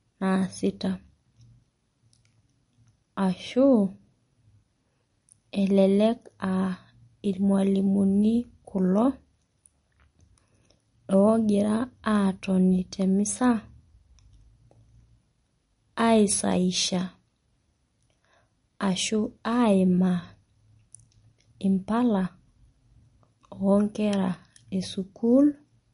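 The speech carries plainly audible MP3 compression from start to finish, likely the result of a low-bitrate encode; the damage fits something around 40 kbps. Nothing survives above about 10.6 kHz, so s sounds lose their sparkle and turn dull, while the remaining upper detail has a watery, swirly quality. On a spectrogram this shows as a hard flat ceiling at 10.6 kHz, with patchy holes and isolated blobs flickering on and off beneath it from frame to frame.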